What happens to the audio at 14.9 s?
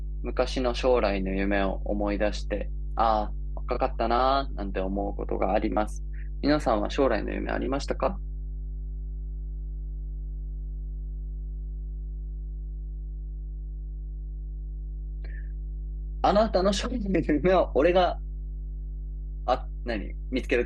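At 14.9 s, as throughout the clip, mains hum from power-line coupling adds a steady, fairly prominent 50 Hz drone beneath the speech, seen as an unbroken low horizontal spectrogram line.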